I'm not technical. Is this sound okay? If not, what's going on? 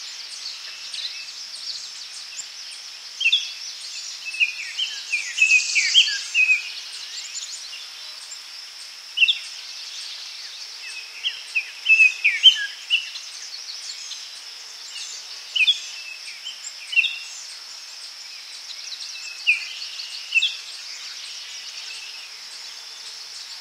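No. There are seven tiny skips at 2.41, 5.39, 8.38, 11.37, 14.36, 17.35 and 20.34 seconds, spaced roughly every 3 seconds. At each one, a sliver of sound, about a hundredth of a second, is gone, and the two sides are butted straight together. This is audio missing between chunks. The recording was likely handled in blocks of about 3 seconds, and a little was dropped each time one block ended and the next began.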